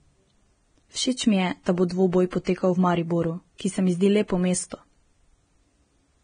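Throughout, the speech is hissy and grainy with nothing above 9.7 kHz, likely Vorbis compression at a heavy setting near 22 kbps, not plain low-pass filtering, because the coarse treble turns into noise.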